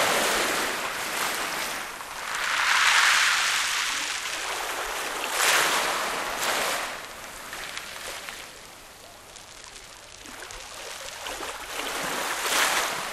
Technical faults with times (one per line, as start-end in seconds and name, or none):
0.00-13.13 MP2 compression